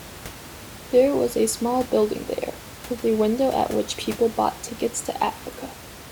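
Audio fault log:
No system faults detected in this speech clip; the audible room noise sits about 17 dB below the speech and belongs to the recording space.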